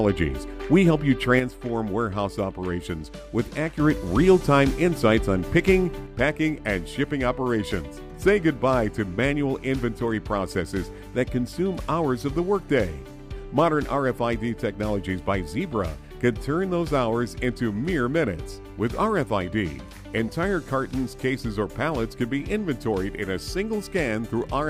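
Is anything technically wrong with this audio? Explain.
Yes. The level falls abruptly by about 6 dB from 1.40 to 3.80 s, recovers, then drops again at 6.06 s and stays down until the end. The likely cause is one channel dropping out. When one side of a stereo pair goes silent, the mono sum keeps only half of the shared content, which gives the 6 dB step, and anything present only in the lost side vanishes.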